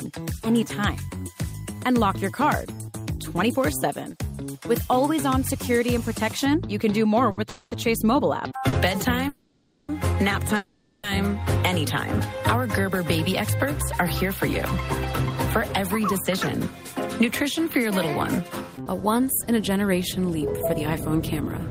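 From 0.56 to 2.56 s a USB whine sits under the audio: a fixed tone at 1 kHz with its strongest component at the 2 kHz harmonic, at about 30 dB below the signal. It fits current drawn by the bus in 1 ms frames leaking into the audio through power or ground. On a spectrogram it shows as thin, perfectly horizontal lines at 1 kHz and 2 kHz that start and stop abruptly, unaffected by the surrounding content.

At 7.31 s comes a short stall from a late packet. The receiver's jitter buffer emptied and it stretched the last sound for 60 ms until the packet arrived, then carried on from the same point with nothing lost. A sound is held slightly too long with a slight buzz or dip. On the waveform a short stretch repeats one shape, and on a spectrogram it appears as a brief smear of frozen spectrum. A second stall at 8.69 s holds the sound for 40 ms in the same way.

Longer holds follow at 7.49 s for 220 ms, at 9.29 s for 600 ms and at 10.57 s for 470 ms. 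Each is a call audio freeze: the last sound is drawn out as a fading buzz or hiss and never drops to silence, and then the audio resumes where it stopped, so time is inserted and nothing is missing. The likely cause is packets held up in transit, which drained the jitter buffer. A spectrogram shows a flat, blurred band that gradually dims, with the waveform envelope decaying smoothly instead of following the content.

From 15.82 s to the end near 21.62 s there is a jitter buffer speed-up. The receiver had accumulated more delay than it aims for and trimmed many short pieces, each one or a few pitch periods long, removing about a fifth of a second in total. Playback runs about 4% fast at an unchanged pitch. Spectral lines keep their frequencies, but events arrive closer together, and the waveform shows many tiny splices where cycles were dropped.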